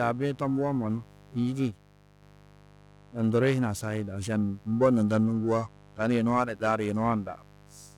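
A steady, raspy buzz sits under the speech from the start and never lets up, at about 25 dB below the speech. It is mains buzz: sharp switching spikes from a dimmer, rectifier or unshielded lead, recurring twice per 50 Hz cycle, with harmonics climbing into the kilohertz range.

Alongside it, the speech carries a rough, metallic edge throughout that disappears in the pauses. This is periodic clock jitter. Interference at around 1 kHz wobbles the converter's clock, so every component of the speech gains sidebands about 1 kHz above and below it, and the roughness is strongest on higher frequencies.

At 1.71 s the speech and the background noise both drop abruptly by about 4 dB together, with no fade. They stay quieter until 2.22 s, then snap back. This sudden gain jump was likely a digital gain change applied between one sample and the next without any ramp.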